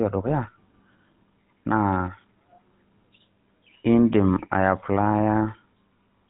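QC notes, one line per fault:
Throughout: GSM full-rate codec. The speech has passed through an early GSM vocal-tract model, likely at 13 kbps, that rebuilds the excitation from sparse regular pulses, giving plainly audible buzzy, gravelly roughness, with nothing above about 3.9 kHz surviving.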